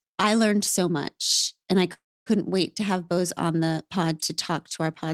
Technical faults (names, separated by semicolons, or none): call audio freeze